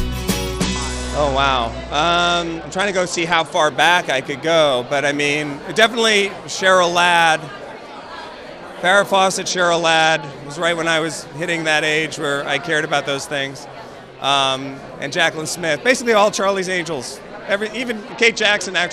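From 0.47 to 3.54 s, 9.5 to 10.32 s and 18.11 s to the end, a Bluetooth SBC bit pool drop dulls the treble and adds gritty noise. The spectrogram's upper bands empty out, consistent with the bit pool falling from 31 to 11, around 83 kbps.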